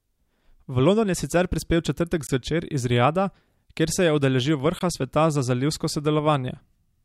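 Two short holes cut into the speech, the first from 2.27 to 2.29 s just after "sicer prispel v četrtek" and the second from 4.79 to 4.81 s. Each is a clean 20 ms dropout of silence, and they fall 2.5 s apart. This is a gap between chunks. The audio was carried in 2.5 s blocks, and silence was left at each join. No speech is lost, but the flow is briefly broken at every boundary.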